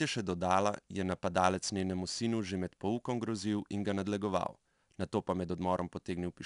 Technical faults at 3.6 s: 4-bit ADPCM compression

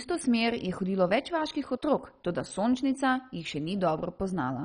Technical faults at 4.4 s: MP2 compression

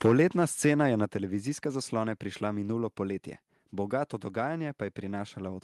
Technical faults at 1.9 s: none

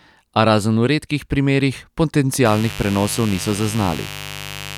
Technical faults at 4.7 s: mains buzz

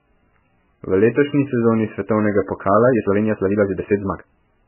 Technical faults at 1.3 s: MP3 compression

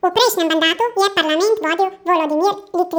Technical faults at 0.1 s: audio read two samples at a time (double speed)

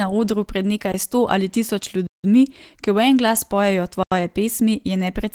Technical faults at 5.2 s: Opus voice compression

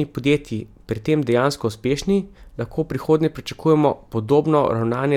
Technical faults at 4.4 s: none

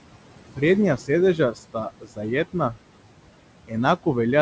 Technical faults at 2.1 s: noise suppressor artifacts; speech cut by the noise suppressor

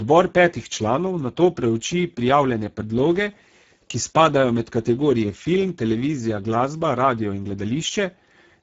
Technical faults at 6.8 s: Speex codec

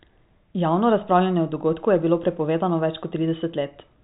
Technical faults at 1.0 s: none

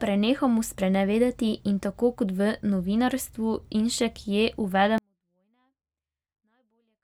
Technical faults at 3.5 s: none

